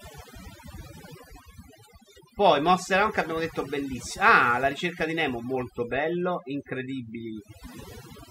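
Overdone noise removal runs through the whole clip. A noise reducer set far too aggressively drops individual frequency bands whenever they sit near its noise estimate, taking quieter parts of the speech with them, so gaps between phrases fall to near silence with twinkling specks.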